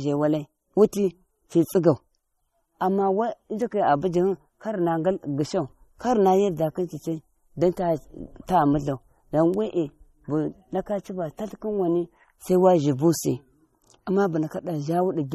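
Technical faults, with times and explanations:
Throughout, MP3 compression: speech has a watery, swirly edge and nothing above 13.2 kHz, likely from a starved encoder around 32 kbps dropping treble and weak detail.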